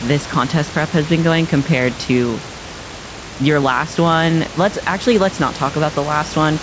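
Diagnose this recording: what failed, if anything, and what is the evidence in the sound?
Nothing failed; every stage in this recording works as expected.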